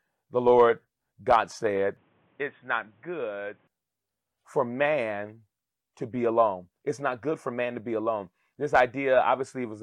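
From 1.97 to 3.67 s the speech goes dull and boxy, with nothing above 3.8 kHz, a bit quieter, and faint new background noise, then clears again. That's most likely the input switched to a poorer device, with no gap at either switch.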